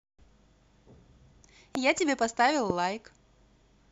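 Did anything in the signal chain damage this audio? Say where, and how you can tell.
Yes, there are two loud pops in the speech, one from 1.75 to 1.77 s and one from 2.70 to 2.72 s. Each is a single sharp click peaking around 15 dB above the speech, which carries on unbroken beneath it. The likely cause is in the analogue wiring, where a brief voltage step from a loose plug, a switch or a static discharge is added to the signal, and the following circuits shape it into a short pulse.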